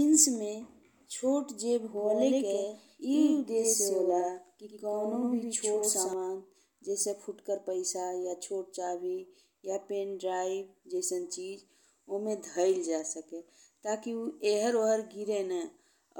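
A doubled audio track runs from 1.97 to 6.13 s: the speech is heard twice, with a second copy of about equal loudness trailing by roughly a tenth of a second. It's likely a slower capture path mixing the same signal back in, and it starts and stops abruptly, with no room decay.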